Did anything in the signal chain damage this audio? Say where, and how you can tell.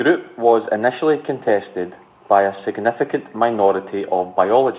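No, nothing in the chain damaged this speech. The A-law telephone coding at 8,000 samples a second is working as intended: the sound stops at 4 kHz, and a faint hiss rises and falls with the speech level.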